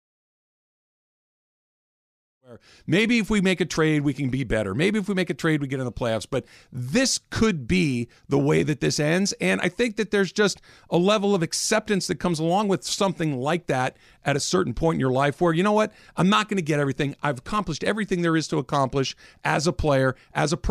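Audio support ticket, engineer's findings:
No fault found in the speech recording. The level rises in a smooth fade-in from about 2.5 s to 3.0 s, with no click or hard edge at the start.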